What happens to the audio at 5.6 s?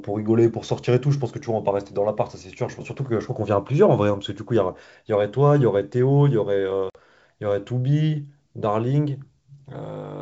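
Nothing goes wrong at 5.6 s: the speech carries on intact through that moment, with only the G.722 wideband telephone coding at 64 kbit/s shaping the sound and leaving at most a faint trace.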